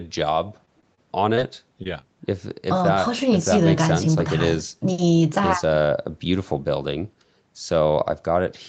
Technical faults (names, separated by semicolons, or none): short concealed packet loss; short stall from a late packet